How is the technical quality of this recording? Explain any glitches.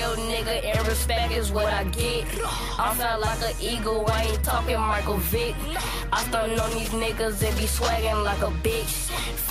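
Nothing in the recording stood out as a technical problem on listening.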